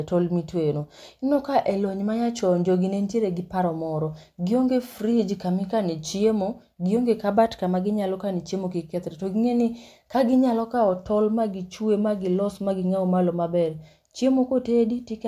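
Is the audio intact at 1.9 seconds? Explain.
Yes, the speech at 1.9 seconds plays through intact, with no audible fault at that moment.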